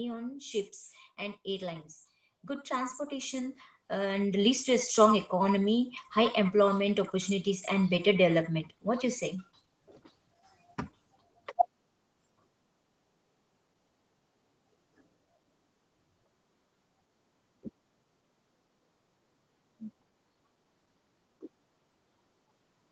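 From 2.46 s to 4.96 s you can hear automatic gain rising. The gain control decided the input was too quiet and raised its gain by about 9 dB over those two and a half seconds. The speech and the background noise both swell up together, with no sudden jump, just a steady climb in loudness. Throughout, the sound has the call path's band limit, with nothing above about 8 kHz, which fits a low-bitrate Opus setting.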